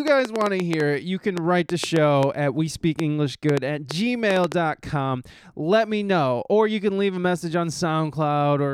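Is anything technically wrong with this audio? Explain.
Yes. From 0.08 to 4.53 s, a train of clicks ticks over the speech at about 4.5 per second with uneven spacing, around twenty sharp pops, each peaking roughly 15 dB above the speech. Repeated pulses like this are likely from electrical interference or a faulty connection or power supply.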